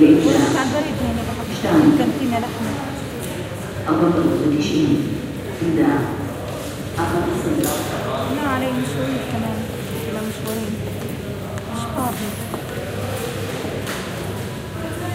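Nothing technically wrong turns up anywhere in this recording of sounds, so there's nothing to point to or explain.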